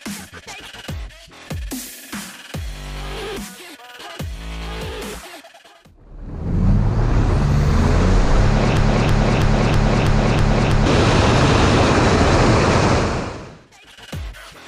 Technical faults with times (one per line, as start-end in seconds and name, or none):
8.77-10.86 broken-record loop